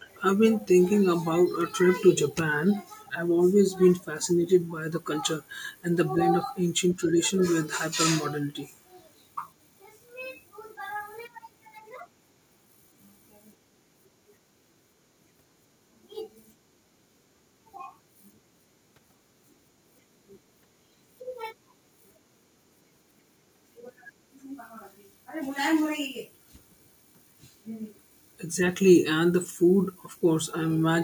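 Short scraps of echo leak appear at 0.00–0.22 s, 3.05–3.12 s, 4.01–4.05 s, 4.23–4.28 s and 30.03–30.08 s. Each is a faint copy of the speech arriving 383 ms behind the original, roughly 25 to 35 dB down, loudest at 4.23 s and 30.03 s. The likely cause is a far-end loudspeaker whose echo canceller let residual microphone pickup through, so brief fragments of delayed speech return over the call.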